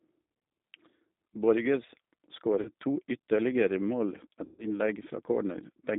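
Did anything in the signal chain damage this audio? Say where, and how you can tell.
Yes. At the codec stage, the whole clip carries G.729 coding damage, plainly audible throughout. The speech is confined to a line band of roughly 200 Hz to 3.7 kHz, with nothing above it, and has the rough, slightly synthetic texture of a vocal-tract filter driven by a few pulses per subframe. That fits an 8 kbit/s G.729A stream, where the speech is rebuilt from model parameters rather than carried as a waveform.

At the network stage, there are two episodes of VoIP packet loss concealed by the speech codec. The first runs from 2.61 to 2.70 s and covers about 40 ms of missing audio, which fits two lost packets. The second runs from 4.45 to 4.79 s and covers about 140 ms, which fits seven. In each gap the decoder extends its last pitch and filter state at falling gain. Because each frame depends on the one before, the disturbance lasts longer than the missing audio.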